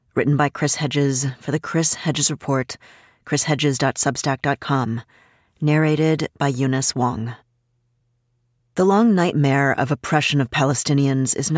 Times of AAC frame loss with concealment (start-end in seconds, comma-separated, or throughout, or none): none